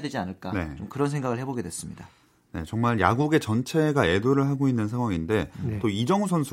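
No technical faults can be heard in this speech recording. The signal runs without any break or audible change from beginning to end.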